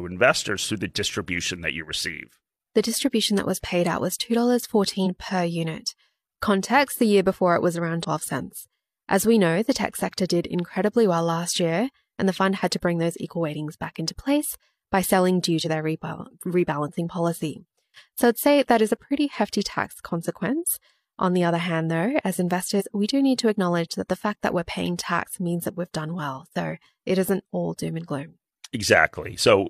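Five brief bursts of damaged data in a compressed stream (5.02 s before "per unit", 7.99 s after "year before it was", 15.61 s, 22.76 s before "we do need to", 25.22 s) each last 50 to 70 ms. Corrupted frames throw the decoder out of sync, yielding a chirp, squawk, click or short hole at each.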